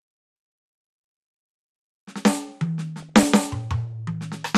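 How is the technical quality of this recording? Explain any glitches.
The technical quality is poor. The music is dull and grainy throughout, with a short burst of blipping damage near the end.

Across the whole clip, the sound is muffled, with a gurgling, granular edge. This is likely MP2 compression at a bitrate near 80 kbps. With so few bits, upper sub-bands drop out and flicker. The remaining bands are coarsely quantised.

From 2.99 to 3.24 s, DAB burbling breaks through. It sounds like short blips of noise. Bit errors, at a rate under one percent, slipped past error correction. They corrupted samples across about a dozen frames, putting short blips of noise into single sub-bands.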